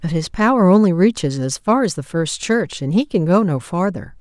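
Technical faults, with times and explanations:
No technical faults can be heard anywhere in the speech. There is nothing here that needs a time or an explanation.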